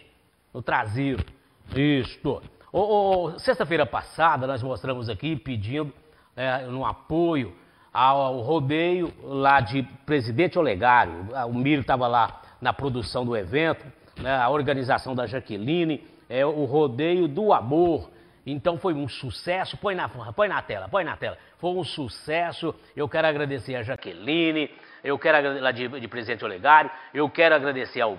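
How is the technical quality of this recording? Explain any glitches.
The recording has one glitch, near the end. At 23.96 s the sound drops out for about 20 ms, then continues to the end duller and boxier. This is likely an input switched to a poorer device. The new input passes nothing above 5.3 kHz, shifts the level by a few decibels, and adds its own faint background noise.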